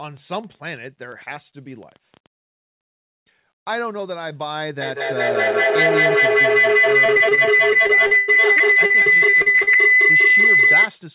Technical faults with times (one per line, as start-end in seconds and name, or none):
0.00-2.27 train of clicks
4.81-11.00 feedback howl
7.06-9.90 repeated packet loss (robotic sound)